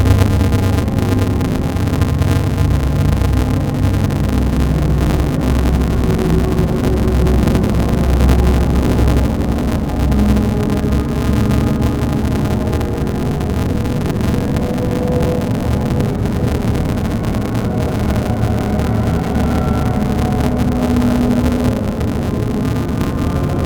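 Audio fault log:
throughout: interleaved audio read as planar. The sound is dull and robotic, with a steady buzz at 188 Hz. Each 5.33 ms block, which fits a 256-sample buffer, has its alternating samples split into halves played together at half speed. Blocks this short give no clear octave drop.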